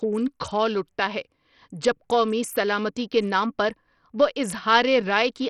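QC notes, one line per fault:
throughout: likely Bluetooth SBC compression. Treble flickers, nothing above 17.3 kHz, gritty noise on the speech; starved, coarsely quantised upper sub-bands fit a bitrate near 64 kbps.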